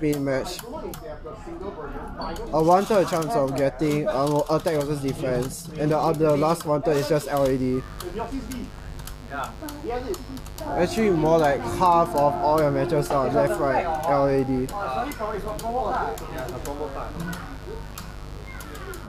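At 7.39 s a mains buzz enters and continues to the end of the clip. It is a steady, raspy buzz built on 50 Hz, sitting about 15 dB below the signal. The edge comes from sharp switching spikes, such as those from a dimmer, a rectifier or an unshielded run, picked up twice per mains cycle. Those spikes carry harmonics of 50 Hz well up into the kilohertz range, which is why it rasps rather than hums.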